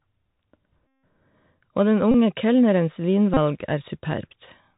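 Speech, squeezed through a Bluetooth CVSD headset codec the whole way, and the damage is plainly audible. The one-bit delta coding, which fits a 64 kbps CVSD link, caps everything at 4 kHz, so the top end is gone. The adaptive step can't keep up with loud high-frequency energy, so sibilants come out scratchy and there's a grainy hiss sitting under the voice. On top of that there are three stretches of Bluetooth headset packet repeated, where lost packets got replaced by the previous one decoded again. The big one runs from 0.87 to 1.03 s, about 161 ms, and the 3.75 ms repeat turns into a steady buzz near 267 Hz. Shorter bursts hit at 2.12 to 2.15 s, about 26 ms, and 3.34 to 3.37 s, about 30 ms, each a brief buzzy blip.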